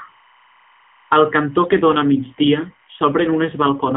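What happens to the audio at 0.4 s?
At 0.4 s you're hearing timecode bleed, which runs through the whole clip. Linear timecode at 25 frames per second is leaking in as a square wave flipping between roughly 1 kHz and 2 kHz, giving a faint chirping warble well below the speech, somewhere around 35 dB down.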